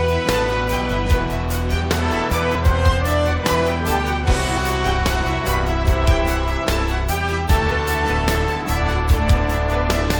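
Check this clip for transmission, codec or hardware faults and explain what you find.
One codec fault turns up three times: compressed frames skipped, at 2.54 s, 4.56 s and 7.70 s. Whole 23.2 ms frames never reach the output. The first jump loses about three frames, roughly 70 ms, and the others about one each. At each join the audio jumps ahead by the length of the missing frames rather than leaving a silent gap, which separates it from a packet dropout.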